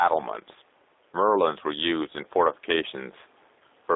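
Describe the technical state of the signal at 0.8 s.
At 0.8 s the gain swings by about 5 dB, so quiet and loud moments sit unnaturally close together and the sound feels squashed. This gain pumping, present across the whole clip, is likely caused by input gain set far too high, with a fast limiter repeatedly pulling it down.

The speech at that moment is also narrow and slightly rough and synthetic, confined to roughly 300 Hz to 3.7 kHz. That is G.729 codec damage, plainly audible throughout and consistent with an 8 kbit/s codec that rebuilds speech from a vocal tract filter, a pitch predictor and a few pulses per frame.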